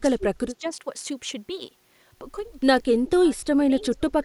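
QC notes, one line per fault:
0.00–0.65 s, 2.94–3.47 s, 3.70–4.25 s: speech suppressed in double talk. The speech dips in patches. The deepest cut is about 25 dB at the start, easing to about 20 dB and then about 15 dB. This is likely an echo canceller suppressing the near talker during simultaneous far-end speech.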